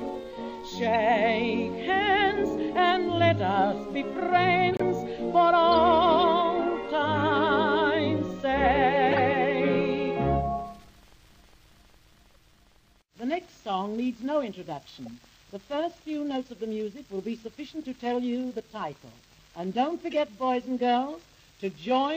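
Brief chirps and noise blips land at 0.94, 4.70–4.82, 5.72–5.75, 9.11–9.19, 12.33–12.41, 15.06 and 20.11–20.15 s. They are loudest around 4.7 and 9.1 s and faintest at 12.3 s. These are corrupt frames decoded: damaged compressed data was played anyway, putting energy at the wrong frequencies.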